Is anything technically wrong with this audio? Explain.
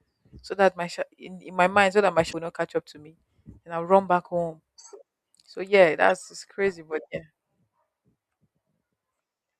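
Yes. The speech is hit twice by damaged data in a compressed stream, at 2.29 to 2.34 s and at 6.09 to 6.11 s. In each spot, part of the encoded stream is corrupt, so the decoder misreads the affected frames, loses sync and has to hunt for the next valid frame header before it can decode normally again. That failure is heard as a brief chirp or blip that cuts into the speech, about 50 ms long the first time and 20 ms the second.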